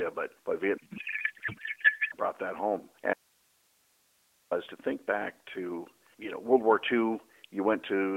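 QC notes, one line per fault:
0.78–2.15 s, codec payload misread: right after "but but" the speech turns to garbled noise and warble that barely tracks it, until "that home". Octet-aligned AMR frames were unpacked as bandwidth-efficient, so every field landed in the wrong place.
3.14–4.51 s, audio dropout to a faint residue: after "that home" the signal cuts out abruptly for about 1.38 s, leaving only hiss roughly 40 dB down, then snaps back at "to think back to". This is likely a loss upstream while the path stayed live.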